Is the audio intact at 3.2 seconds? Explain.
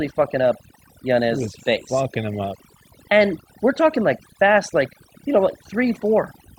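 No. At 3.2 seconds, as throughout the speech, overdone noise removal is audible: bands near the estimated noise floor are pulled down so hard that quiet parts of the voice vanish, leaving speech over near silence with twinkling specks. A spectrogram shows scattered isolated dots and gaps.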